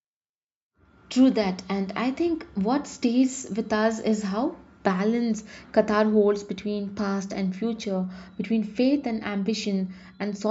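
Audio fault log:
Nothing stood out on listening; the speech came across steady and even all the way through.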